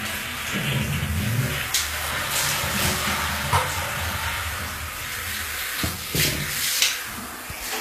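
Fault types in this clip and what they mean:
Low-bitrate audio saved at a high bitrate: nothing is heard above 14.9 kHz, likely because a heavily compressed encode was later resaved as a high-bitrate MP3. Unlike a simple low-bitrate file, the file is large, yet the missing detail never returns.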